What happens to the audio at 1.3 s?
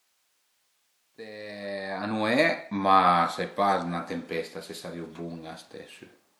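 At 1.3 s the speech carries generation loss, and it runs through the whole clip rather than starting there. The sound is swirly and hollow, with softened attacks and a smeared texture. The cause is likely repeated lossy coding, about four passes through WMA at 128 kbit/s. Each pass requantises on a shifted frame grid. Noise and spectral gaps pile up beyond what that bitrate alone would give. Content extends to about 20.1 kHz.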